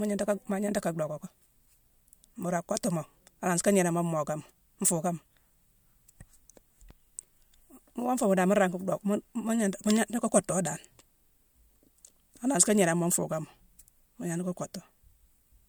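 No technical faults can be heard anywhere in the recording.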